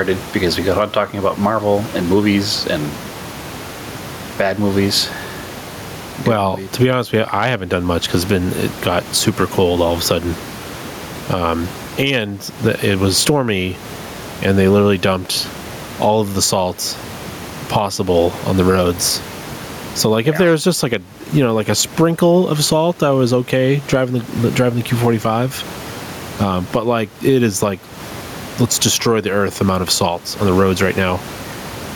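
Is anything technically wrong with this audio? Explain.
Yes. Gain pumping runs through the whole speech clip. The input gain is likely set far too high, so a fast limiter clamps down on every loud syllable and lets go in the gaps. The level swings by around 15 dB. The room noise sits about 29 dB below the speech, and the speech is left squashed and flat in dynamics.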